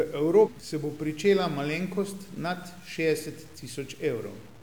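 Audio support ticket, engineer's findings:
Grainy, signal-following distortion on all speech; quiet tails sputter or drop out. Likely low bit depth without dither, fits 7-bit truncation. Waveform shows visible staircase steps; error floor about 30 dB down.

0.42–0.49 s: short glitch. Damaged data in the compressed stream; the decoder lost sync. Spectrogram shows a disruption, and the waveform shows a discontinuity.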